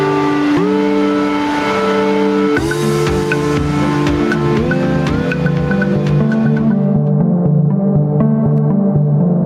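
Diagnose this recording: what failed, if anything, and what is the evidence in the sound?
Gain pumping runs through the whole clip. The gain swings roughly 10 dB. Loud and soft parts sound squashed together. The likely cause is excessive input gain at capture, with a fast limiter pulling it down.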